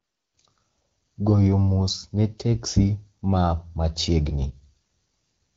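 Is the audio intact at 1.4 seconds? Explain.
Yes, the audio is intact at 1.4 seconds, with the speech coming through the AMR wideband (HD Voice) codec at 12.65 kbit/s cleanly and without any fault at that moment.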